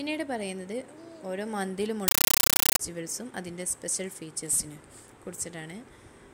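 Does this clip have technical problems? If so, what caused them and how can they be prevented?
Yes. From 2.08 to 2.79 s the sound is replaced by very loud, chattering static, a sign of a compressed stream played as audio. The data is treated as ordinary samples rather than decoded, so each frame becomes a noise burst of about 9.33 ms followed by silent padding, repeating 31.25 times a second, which fits an AC-3 (Dolby Digital) stream. To prevent it, set the receiving device to decode or pass through the bitstream, or send plain PCM over the link.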